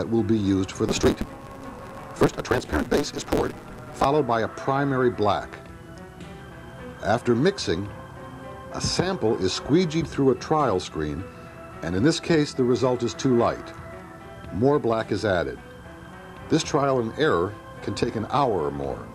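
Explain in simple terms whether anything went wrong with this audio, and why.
From about 0.88 to 4.05 seconds there's a block size mismatch, truncated type. One stage hands over longer chunks, likely 512 samples, than the next takes, so each chunk's tail gets dropped. You hear a 150 Hz buzz, and the sound rushes along about 1.6 times faster at roughly normal pitch.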